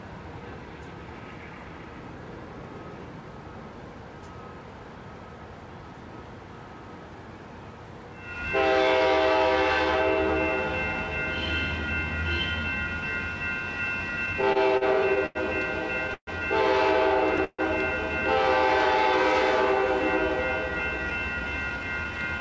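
From 14.26 to 15.37 s the audio hits a run of repeated stalls, a stutter. Packets were turning up late, so the jitter buffer kept running dry, seven times in that stretch. Each time the receiver stretched out the last bit of sound to cover the hole, adding about 192 ms in all. The longest hold is 90 ms. Nothing actually goes missing, but around 17% of that span is filler, so it drags and hiccups along.

At 16.14 s there's a call audio freeze. The sound hangs as a fading continuation for 131 ms, and the last 70 ms of that drops to silence, then picks up right where it left off. The likely cause is packets held up in transit that emptied the jitter buffer, pushing everything after it about 131 ms later. The same thing happens at 17.44 s, with 143 ms of fill ending in 40 ms of silence, again a gap inserted with nothing lost.

From 20.68 to 22.39 s there's a jitter buffer speed-up. The buffer had built up more delay than it wanted. 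The receiver trimmed many tiny pitch-period-sized slices, roughly 150 ms in total, so this stretch plays at about 109% speed with no change in pitch and sounds a bit rushed. Underneath it all, the call path's band limit leaves nothing above 8 kHz, which fits G.722 at 64 kbps.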